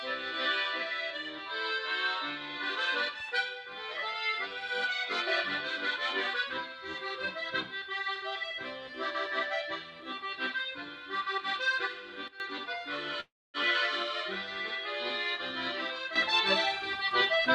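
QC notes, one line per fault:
12.28–12.40 s and 16.16 s to end, sudden gain jump. At 12.28 s the level drops by about 12 dB in a single step and stays down for 0.12 s. At 16.16 s it rises by about 10 dB at once and holds to the end. Sound and background noise move together, with no fade. The likely cause is a digital gain setting applied without a ramp, so the change lands between two samples and can click.
13.20–13.57 s, call audio freeze. The sound stalls and the last moment carries on as a fading buzz for part of the gap, then about 240 ms of silence. The gap totals about 0.34 s. Nothing is lost. The audio resumes exactly where it stopped, now running about 336 ms later. Delayed packets likely emptied the jitter buffer, so the receiver filled time until they arrived.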